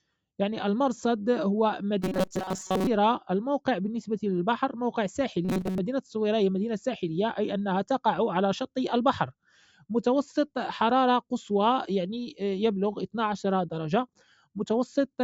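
From 2.02 to 2.87 s, and again from 5.45 to 5.79 s, the sound goes hard and metallic, with a fixed buzz sitting at 188 Hz. That's robotic sound from repeated short buffers, most likely. Fresh audio isn't arriving often enough, so the same tiny chunk, roughly 5 ms long, gets looped to fill the gap. Most of what you hear in those stretches is those repeats, and the loop rate is what pins the buzz at that pitch.

Later, from 9.43 to 9.84 s, the level dips by about 15 dB, and from 14.09 to 14.56 s it drops by about 18 dB. That's sound cut by the noise suppressor. It decided those bits were noise and pushed them down harder than everything around them, so they sink rather than dropping out entirely. Both dips happen in audio that already has its lowest bass taken out by the call's mic processing.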